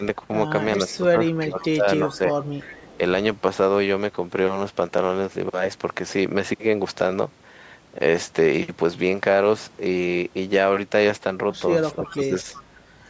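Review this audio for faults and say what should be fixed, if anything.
Speech suppressed in double talk occurs at 0.00–0.04 s, 0.89–1.86 s, 2.04–2.35 s and 11.92–12.50 s. The level dips by about 5 to 15 dB in patches. This is likely an echo canceller that could not tell the near talker from loudspeaker echo while both sides spoke, so it attenuated both. To prevent it, use a headset or an echo canceller with better double-talk detection.

Echo leak occurs at 0.93–0.98 s, 2.42–2.46 s and 2.63–2.97 s. These are short, faint scraps of a delayed copy trailing the speech by 364 ms, about 20 to 30 dB below it. They are likely loudspeaker pickup that the far end's echo canceller failed to remove fully. To prevent it, lower the loudspeaker volume there or switch that side to headphones.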